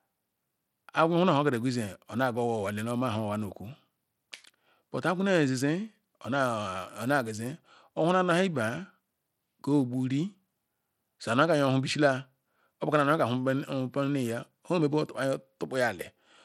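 Throughout, the speech sounds gritty, with flickering treble and nothing above 17.1 kHz, likely from Bluetooth SBC compression starved of bits, fitting roughly 96 kbps.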